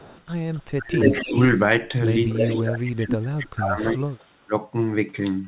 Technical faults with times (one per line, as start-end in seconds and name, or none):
0.00-1.42 echo leak
0.76-1.35 speech suppressed in double talk
2.29-3.17 echo leak
2.41-4.53 speech suppressed in double talk
4.19-4.25 echo leak